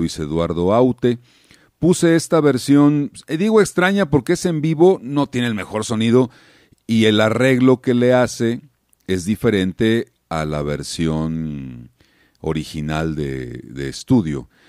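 No technical faults can be heard in this speech recording at any point.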